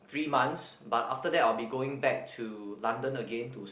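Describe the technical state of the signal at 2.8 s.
At 2.8 s the speech is intact, with no dropout, glitch or distortion, only the narrowband telephone sound of a call codec that carries nothing above 4 kHz.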